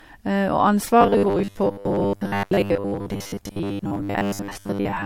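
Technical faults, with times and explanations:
Throughout: generation loss. The sound is swirly, smeared and hollow, with blurred attacks. This is likely the result of passing the audio through a lossy codec several times, probably around four rounds of MP3 at about 64 kbit/s. Each decode and re-encode quantises on a shifted frame grid, so noise and spectral gaps from every pass stack up beyond what a single encode at that rate would leave.
1.01 to 5.05 s: robotic sound from repeated short buffers. From 1.01 s to the end the speech turns into a rigid metallic buzz at 100 Hz that still loosely follows the syllables. The likely cause is audio arriving too seldom, with playback filling the gaps by looping the most recent fragment while fresh audio is skipped. A 100 Hz buzz fits a repeated chunk of about 10 ms. Most of this stretch seems to be repeats rather than new signal.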